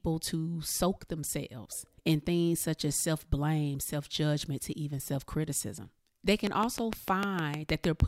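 A speech clip with a train of clicks from 6.47 to 8.01 s. About ten regular clicks at 6.5 per second, around 20 dB above the speech. Likely interference or a faulty connection or power supply.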